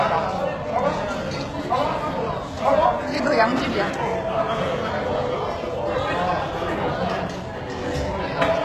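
A recording of sounds with plainly audible treble damage throughout, likely from HE-AAC compression at a very low rate, fitting roughly 16 kbps: upper detail sounds gritty and metallic, and a spectrogram shows copied-looking high bands below a sharp ceiling at 12.3 kHz.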